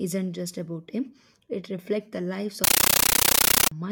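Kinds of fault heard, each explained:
Compressed stream played as audio: after "reflects the lives", from 2.64 to 3.72 s, encoded data is sent out as if it were PCM samples. The result is very loud, chattering static made of 13.3 ms noise bursts with silent padding between them, repeating at 31.25 Hz, which fits an undecoded AC-3 stream.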